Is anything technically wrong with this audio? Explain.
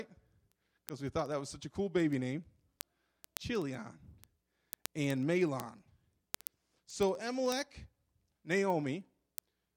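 Yes. Word clock ticks run from 0.14 s to 9.76 s: the receiver's clock isn't locked to the sender's, so about every 70 ms they slip and one sample is dropped or repeated. Around 150 evenly spaced ticks result, suggesting a clock mismatch of a few hundred parts per million.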